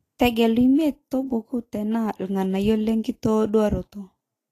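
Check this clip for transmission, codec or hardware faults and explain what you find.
One codec fault runs through the whole speech clip. Throughout, the treble is hissy and grainy, with nothing above 14.2 kHz and softened consonant attacks, likely from Vorbis compression at a rate that fits about 33 kbps, coarsely quantising the upper spectrum into noise.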